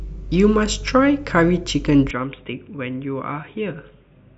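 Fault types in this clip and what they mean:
Input switched to a poorer device: at 2.11 s the speech abruptly turns dull and quieter with no gap, likely from a switch to a narrower-band microphone. A spectrogram loses everything above 3.8 kHz, the waveform shrinks by about 10 dB, and a faint new noise floor appears.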